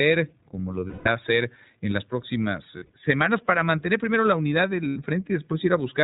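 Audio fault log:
throughout: iLBC codec. The speech is band-limited, with nothing above 4 kHz. It has a slightly rough, synthetic grain. The coding damage is plainly audible, which fits iLBC's 15.2 kbps mode with 20 ms frames.
0.88–1.08 s, 2.78–2.93 s, 4.88–4.98 s: lost iLBC frames. Each gap becomes a held, faintly buzzy vowel. The decoder repeats the last pitch cycle with added noise. The first loss lasts 180 ms. The second is 100 ms, scattered in short runs. The third is 80 ms. Clarity returns almost immediately after each gap.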